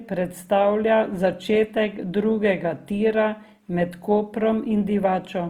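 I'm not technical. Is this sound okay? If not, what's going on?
No. The speech was likely squeezed by Opus compression, which fills in missing detail roughly to save space, so it sounds grainy and rough throughout.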